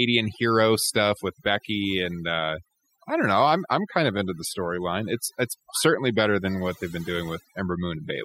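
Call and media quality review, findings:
Overdone noise removal, throughout. Background drops and breaks up into twinkling specks. Noise suppressor set too aggressive: bands near its noise estimate gated hard, taking quiet speech components with them. Reduce suppression depth.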